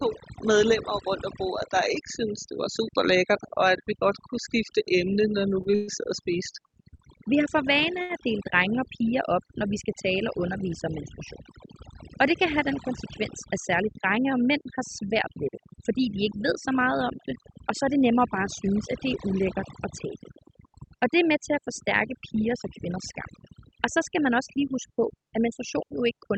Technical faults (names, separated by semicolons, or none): overdone noise removal; repeated stalls (stutter); short stall from a late packet; jitter buffer speed-up